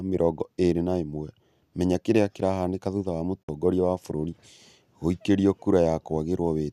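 At 3.43 s the speech drops out in a digital broadcast dropout, returning at 3.49 s. The receiver stopped getting frames it could decode, either because the signal was lost or because frames failed their checksum, so it muted its output instead of playing corrupted data. The sound fades down over about 8 ms into a hole of roughly 48 ms, which fits two lost frames, and then resumes. Whatever was transmitted during that gap is gone.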